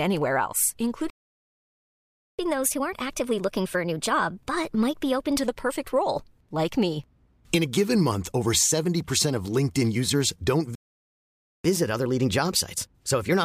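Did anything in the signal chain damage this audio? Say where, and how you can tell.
Yes. Playback stalls occur at 1.1 s and at 10.75 s, both at the playback stage. The first silence lasts about 1.28 s, until 2.39 s. The second, right after "users don't", lasts about 0.89 s, until 11.65 s. Each time the speech breaks off mid-flow and resumes where it left off rather than skipping ahead. The likely cause is the player's buffer running dry or its output thread being blocked, leaving nothing to send to the output.

Catch-up at higher speed follows each stall, from 2.39 s to 5.39 s, starting at "the perfect role like", and from 11.65 s to the end of the clip, starting at "looking on". The speech runs 1.1 times faster and sits roughly one and a half semitones higher, because the player resamples its backlog to recover the lost time. Speed and pitch rise together, which marks this as resampling rather than time-stretching. 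The first episode settles back to normal speed and pitch.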